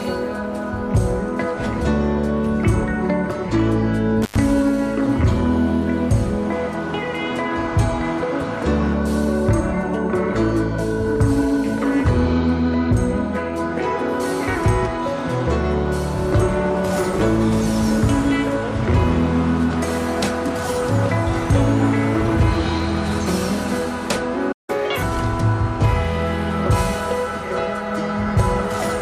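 At 4.22 s an intermittent contact interrupts the signal until 4.38 s. A loose plug or cable connection momentarily breaks the path, and the audio drops out for roughly 105 ms of that span. Each edge of the gap carries a short crackle as the contact scrapes open and then closes again. While the line is open, only a faint hiss remains where the programme material should be.

At 24.52 s the output goes silent for about 163 ms, with the sound halting mid-flow and resuming at 24.70 s. This is a playback stall. The likely cause is the player starving of data or having its audio thread blocked, leaving nothing to send to the output until it recovered. The silence is clean rather than crackly, which separates it from the contact fault earlier.

Immediately after, from 24.70 s to 25.03 s, there is a catch-up at higher speed. The player works through the backlog that built up during the stall by resampling it at 1.5 times normal speed. 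Because resampling shifts speed and pitch together, the sound runs fast and rises by roughly a fifth, about seven semitones, for that third of a second.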